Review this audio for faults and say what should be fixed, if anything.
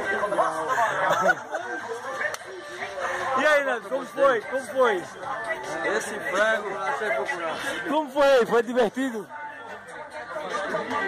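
Nothing stood out on listening, so there is nothing here that needs fixing.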